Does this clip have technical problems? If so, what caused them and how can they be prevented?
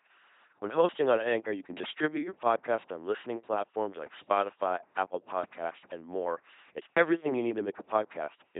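Yes. Throughout the speech, an LPC-10 vocoder leaves a buzzing, robotic sound with nothing above 3.8 kHz. Each moment is forced fully voiced or unvoiced, which fits a 2.4 kbit/s codec. To prevent it, record or send through a higher-rate modern codec.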